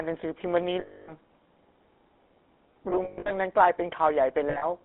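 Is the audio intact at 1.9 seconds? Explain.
No, at 1.9 seconds the speech is still running through the GSM full-rate codec that covers the whole clip. It rebuilds speech from a vocal-tract model fed by a sparse pulse train, which fits a 13 kbps stream. The band sits between 250 Hz and 3.6 kHz, and you get that plainly buzzy, gravelly grit.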